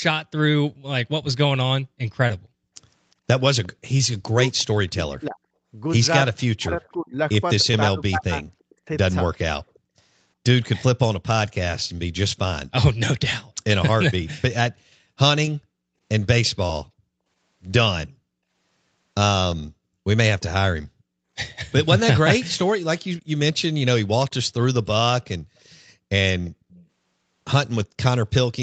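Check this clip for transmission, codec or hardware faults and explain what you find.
Echo canceller problems run through this call, with three kinds of fault.

Background gated by the echo canceller occurs at 2.38 to 3.27 s and again at 9.79 to 9.96 s. The canceller turned the microphone down hard while the loudspeaker played. The room sound drops by about 32 dB, then about 40 dB, for roughly half a second and 150 ms.

Echo leak appears from 3.63 to 16.5 s, from 19.54 to 20.81 s and from 25.22 to 27.86 s. A faint copy of the far side's speech returns 352 ms late, roughly 30 dB below the speech. The likely cause is incomplete echo removal at a loudspeaker end.

Speech suppressed in double talk happens between 4.21 and 8.8 s. The talker's speech dips by up to roughly 40 dB in pieces, about two seconds in all. This is likely the canceller mistaking simultaneous talk for echo and turning both down.

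The call's microphone processing has removed the lowest bass, and nothing is heard above 8 kHz.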